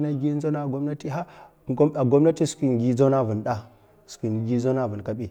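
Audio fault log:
No fault is heard in this speech clip.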